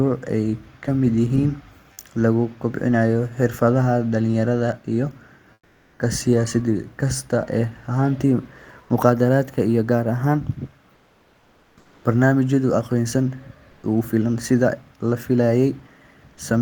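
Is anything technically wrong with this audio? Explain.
Yes. Comfort noise replaces the background at 5.53 to 5.99 s, 10.95 to 12.03 s and 13.71 to 13.83 s. This likely comes from discontinuous transmission during pauses. The real background becomes flat synthetic hiss, about 4 to 7 dB quieter.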